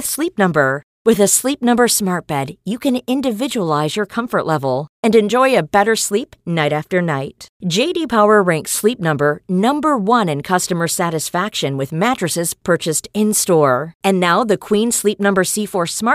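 No technical faults are audible.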